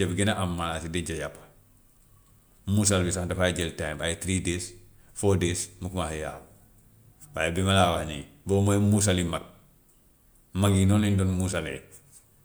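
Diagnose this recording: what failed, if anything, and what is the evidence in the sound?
Nothing in the speech stood out as faulty on listening.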